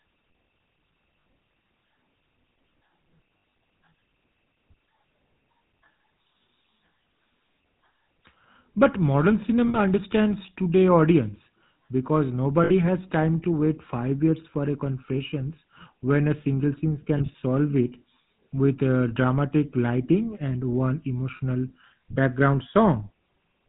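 Speech coded throughout with the GSM full-rate codec, consistent with a 13 kbps stream, with nothing above 4 kHz and a plainly buzzy, gravelly roughness. Lost GSM frames at 1.25, 3.38–3.54, 9.68–9.77, 12.64–12.71, 17.18–17.35 and 21.36–21.41 s, each 40 to 100 ms, become brief metallic rings as the decoder repeats the last good frame at falling level.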